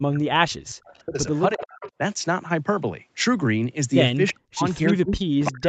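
Speech suppressed in double talk runs from 0.0 to 1.28 s, with the voice dipping by as much as about 40 dB. It is likely an echo canceller mistaking overlapping talk for its own loudspeaker echo and turning everything down. An echo leak overlaps it at 0.87 to 1.16 s: a faint copy of the voice, about 30 dB down, trailing 352 ms behind. A stronger leak follows at 1.32 to 1.91 s, only about 15 dB below the speech, likely as residual loudspeaker echo slips past cancellation. Suppression returns at 1.55 to 1.99 s, pulling the voice down about 30 dB. Brief echo scraps at 4.27 to 4.33 s and 4.86 to 4.94 s each lead into further suppression, from 4.32 to 4.64 s and from 4.93 s to the end, with the voice dropping by up to about 40 dB.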